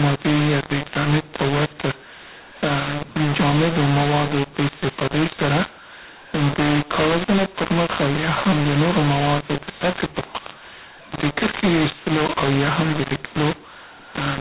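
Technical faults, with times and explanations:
Throughout, mu-law and A-law mixed up: the speech is harsh and gritty, with levels jumbled so some parts are too loud and others too thin, and the pauses hiss instead of falling silent. The telephone audio was coded with A-law and decoded as mu-law, so each 8-bit code maps to the wrong step on the logarithmic scale, and near-silent samples come out well above zero. The 4 kHz telephone band is heard through the distortion.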